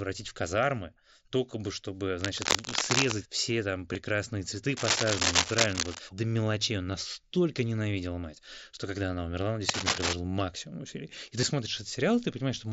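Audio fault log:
2.21–3.12 s, 4.77–5.99 s and 9.69–10.13 s, cable scratch noise: dense, uneven bursts of scratching and rustling sit on top of the speech. The first burst runs between "казармы только бы чтобы" and "все там", and the last between "когда она умерла он" and "максимум усилий". The first and last are about as loud as the speech, and the middle one is about 5 dB louder. The likely cause is a worn cable, connector or control being moved, so its contact resistance jumps around rapidly and injects bursts of crackle into the signal.
3.93 s and 11.41 s, concealed Bluetooth headset packet loss: two very brief gaps, each about 15 ms, each from two lost headset frames. The first comes just after "все там". The receiver filled each gap by continuing the waveform with a closely matching piece of the preceding audio, so there is no dropout, with a small warble where the real signal resumes.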